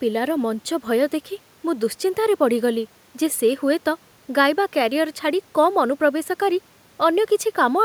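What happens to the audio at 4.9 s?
Nothing goes wrong at 4.9 s; the speech continues intact through that moment.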